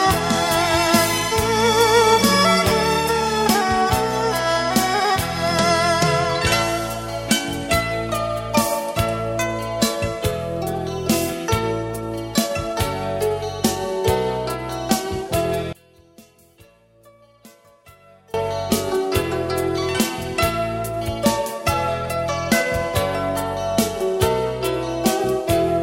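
From 15.73 to 18.34 s the sound collapses to a faint residue about 27 dB down, likely one channel inverted cancelling the shared content when summed to mono. The waveform shrinks sharply there, and the spectrogram darkens.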